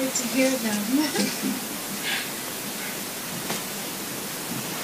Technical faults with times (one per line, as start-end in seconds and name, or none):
none